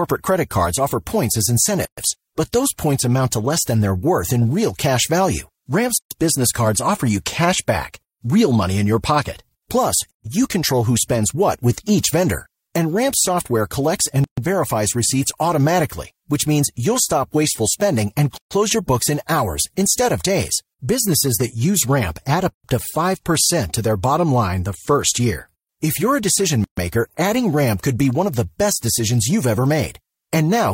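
At 1.85 s the speech drops out for about 125 ms, then again at 5.98, 10.11, 14.24, 18.38, 22.51 and 26.64 s, each time for about 133 ms. These are gaps at the joins of encoded pieces. The audio was encoded in separate runs of 4 s and butted together untrimmed, so each run's leading encoder delay and padded final frame remain as silence. The cuts have their edges smeared by the codec, and speech resumes exactly where it stopped.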